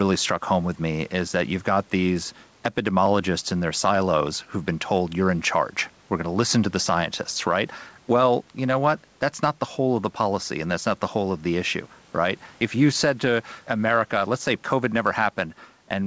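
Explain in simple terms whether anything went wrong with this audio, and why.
Something did go wrong. The speech has gain pumping from start to finish. The level seems to breathe in and out. Loud and quiet moments end up closer in level, so the speech sounds squashed and flat. This is likely caused by the microphone level being set far too high, with a fast limiter pulling it back down on every loud sound.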